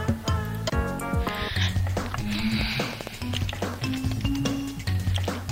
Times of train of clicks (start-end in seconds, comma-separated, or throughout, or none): 2.61-3.75